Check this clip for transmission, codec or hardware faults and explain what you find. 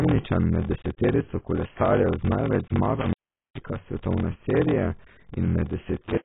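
Three faults are present: a padded block size mismatch, heavy codec damage, and two intermittent contact dropouts.

Throughout, a block size mismatch (padded) fills each block with zeros, producing a 43.1 Hz buzz and slowing the speech to 0.861 times normal speed, which fits 1024-sample reads.

Throughout, the speech is dull and smeared with a warbling texture and nothing above 3.8 kHz, most likely AAC compression at a low bitrate around 16 kbps.

From 3.00 to 3.68 s, and again from 6.01 s to the end, an intermittent contact opens the line. The sound cuts out for about 0.36 s in the first event, with crackle at the edges.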